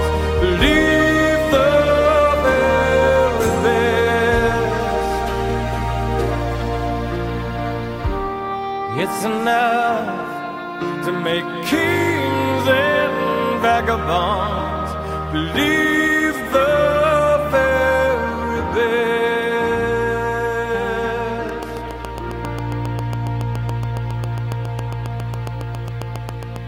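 Train of clicks from 21.49 to 26.57 s: about forty evenly spaced ticks at 7.3 per second, roughly 10 dB above the sound, likely from interference.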